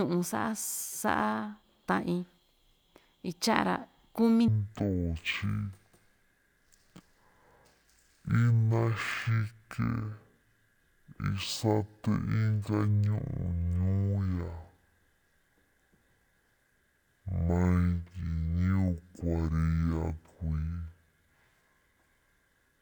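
Speech that turns slow and deep from 4.48 s to the end of the clip. Playback drops to half speed and the pitch falls an octave, 12 semitones down. This is stereo read as mono. The left and right samples sit interleaved, but they are taken one after another as a single channel. Each stereo frame then lasts two samples, so everything stretches to double length. A faint mirrored copy of the sound shows up in the upper half of the spectrum.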